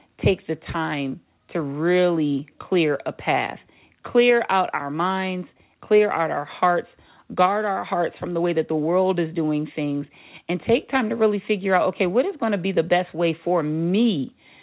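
Speech over a call path with no faults: the lowest bass is removed by the call's microphone high-pass, as expected, and nothing reaches above 4 kHz, which fits a narrowband G.711 A-law codec at 64 kbps.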